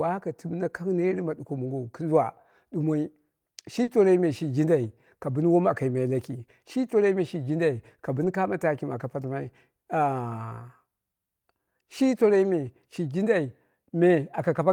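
At 3.83 to 3.89 s there is short concealed packet loss: 40 ms of audio missed the decoder, which extended the preceding sound and crossfaded back. It is heard as a brief smear, and a spectrogram shows smoothed, repeated harmonics or uniform noise with no fresh onsets.

Overlapping its end, 3.87 to 3.89 s, comes a lost packet rebuilt from error correction. The same repair recurs at 4.83 to 4.85 s and at 8.21 to 8.27 s, just before "kano taki mɨ aka". These spans of 20, 20 and about 40 ms come from a low-bitrate copy carried in the following packet. There is no gap in the waveform, but the spectrogram shows grainier, noisier detail there.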